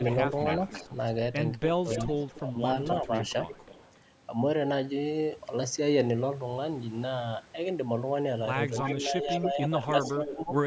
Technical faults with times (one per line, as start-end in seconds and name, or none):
0.05-0.96 echo leak
1.60-2.40 echo leak
1.77-3.11 speech suppressed in double talk
2.96-3.92 echo leak
8.76-10.33 echo leak
9.01-9.74 speech suppressed in double talk
10.35-10.52 speech suppressed in double talk